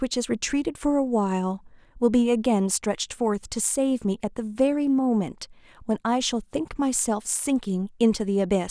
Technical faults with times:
none

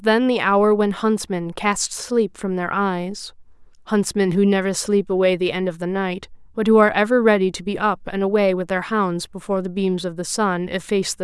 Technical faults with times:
none

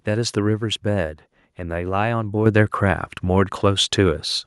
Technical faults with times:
2.46 microphone volume stepped up

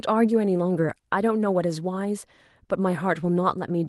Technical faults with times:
none

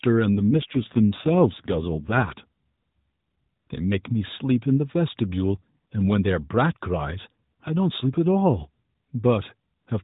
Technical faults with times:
0.38-2.33 AMR rate drop

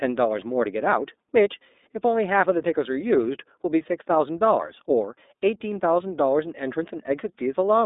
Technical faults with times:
0.00-7.86 iLBC codec

